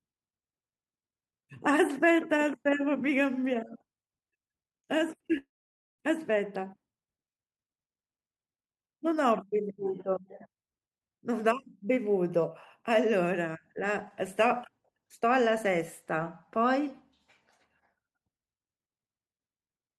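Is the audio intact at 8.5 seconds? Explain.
Yes, at 8.5 seconds the speech plays through intact, with no audible fault at that moment.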